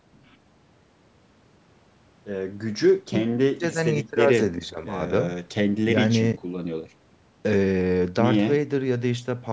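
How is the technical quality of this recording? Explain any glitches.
No technical glitches can be heard in this speech recording, which shows only the ordinary shaping of call microphone processing, with the lowest bass trimmed away and nothing above 8 kHz.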